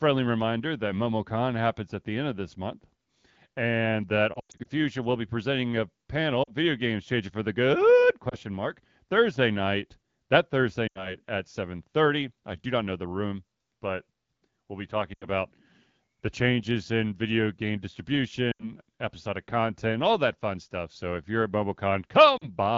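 Wideband speech with lost AMR speech frames: short dips and warbles at 4.33–4.67 s (the worst, scattered over 0.32 s), 6.43–6.51 s right after "will be presenting a", 8.29–8.36 s after "changing for the good", 10.87–11.15 s, 15.13–15.26 s, 18.51–18.72 s just before "episodic content all that", and 22.37–22.49 s. Radio errors likely corrupted those frames, so the decoder stretched the last good sound with fading gain. The AMR-WB coding itself sounds clean, consistent with its 12.65 kbit/s mode.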